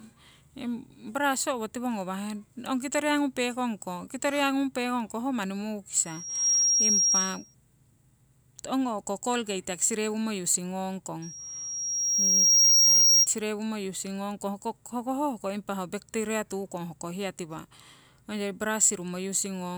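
At 6.05 to 7.55 s and 11.22 to 13.27 s, loudspeaker feedback squeal: a 5.6 kHz loop tone swells, quickly then slowly, well above the speech, drawing a bright horizontal spectrogram line.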